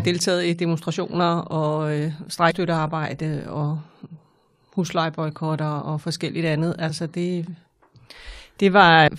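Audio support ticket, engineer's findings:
Damaged data in a compressed stream, three events in the speech. Corrupted or lost bytes make the decoder misread frames, drop sync and hunt for the next frame header. Each event is a short chirp, squawk, click or hole in the speech: 2.50 to 2.52 s; 6.89 to 6.91 s, between "og forskelligt andet" and "så det"; and 9.07 s. Probable component is the stored file or the delivery path. The decoder itself is not suspected.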